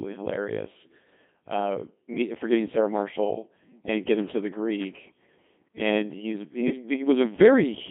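From start to finish the speech has gone through a Codec 2 vocoder, and it's badly mangled. Nothing of the original waveform survives. The decoder rebuilds the voice from sine waves driven by pitch, voicing, energy and a rough spectral envelope, so everything sounds robotic and buzzy. The band is squeezed to roughly 150 Hz to 3.5 kHz, and the heavy smearing comes at a rate of around 2.4 kbit/s.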